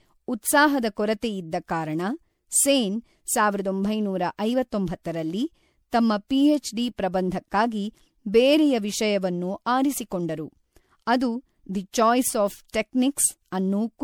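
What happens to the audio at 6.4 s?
At 6.4 s the speech carries generation loss, present throughout the clip: it was likely re-encoded roughly five times with a lossy codec, consistent with MP3 at 96 kbit/s. Each pass re-quantised on a shifted frame grid, so the sound is swirly, hollow and smeared, with blurred attacks.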